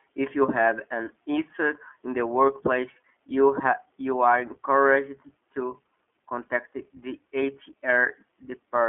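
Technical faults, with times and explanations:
Throughout, iLBC codec: the speech sounds thin and boxed-in, with a slightly rough, synthetic edge that is plainly audible. The band runs only from about 250 Hz to 3.4 kHz, so there is no air or sibilant brightness. iLBC codes each 20 ms frame's excitation on its own, without drawing on the previous frame, and that independent, low-rate coding, which fits its 15.2 kbps mode, leaves the buzzy, artificial texture.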